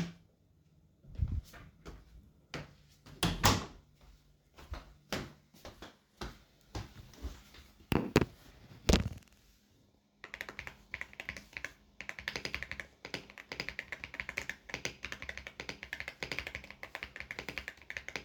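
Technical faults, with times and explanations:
No technical faults are audible.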